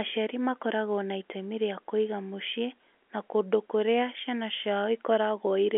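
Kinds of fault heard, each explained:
No kinds of fault are heard in the speech, which comes through the G.711 telephone line as expected.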